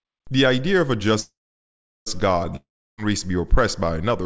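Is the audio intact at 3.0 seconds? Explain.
No, 3.0 s sits right at the tail of a long network dropout running from 2.56 to 3.00 s, likely from packets never arriving. The receiver stretches the last sound into a fading buzz, then roughly 0.33 s of silence follows before audio resumes, missing about 0.42 s.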